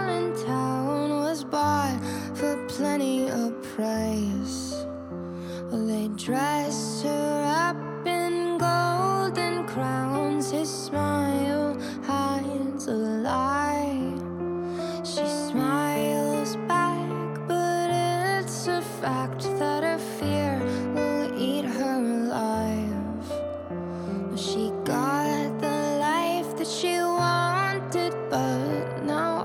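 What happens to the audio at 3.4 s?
Nothing goes wrong at 3.4 s; the audio runs through that moment intact, with no dropout, click, glitch or other fault to be heard.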